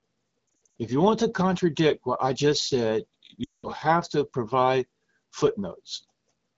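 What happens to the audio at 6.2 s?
Nothing goes wrong at 6.2 s; the speech carries on intact through that moment.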